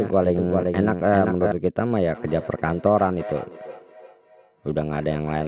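A doubled audio track runs from the very start to 1.52 s: a second full-band copy of the speech trails about 0.4 s behind, roughly 5 dB quieter, with no room colour. It ends abruptly. The likely cause is a slower capture path or an edit holding two copies out of step.

Feedback echo between two devices begins at 2.14 s and lasts to the end. Another device in the room replays this speech, the microphone recaptures it, and the repeats come round about every 0.3 s, thinning and ringing within the roughly 4 kHz call band. The loudest sits about 16 dB below the speech.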